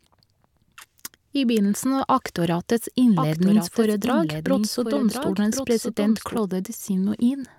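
A doubled audio track runs from 3.18 to 6.38 s. A second copy of the speech, about a second late and roughly 5 dB quieter, is layered over the original, likely from a slower capture path or a misaligned edit. It starts and stops abruptly, with no decay or room colour.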